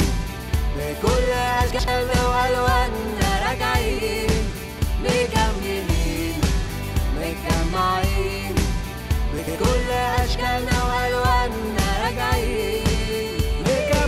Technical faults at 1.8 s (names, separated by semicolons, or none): chunks out of order